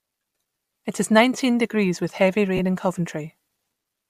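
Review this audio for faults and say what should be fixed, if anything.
Lost LE Audio frames occur at 0.67–0.69 s and 2.57–2.60 s, just after "nineteen degrees with heavy". Each gap lasts 20 ms, which fits two 10 ms frames. The decoder patches each gap with a noisy smear of the previous spectrum rather than dropping to silence or clicking, which distinguishes this from a plain dropout. Stronger link margin or more retransmissions would prevent it.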